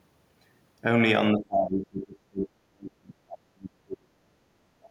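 From 1.33 to 4.39 s the speech is pushed down in uneven pieces, at worst dropping something like 35 dB, a dip of about three seconds. It sounds like speech suppressed in double talk, likely from an echo canceller that mistook overlapping far-end sound for echo. On a waveform the envelope collapses, and a spectrogram shows the upper bands thinning or blanking.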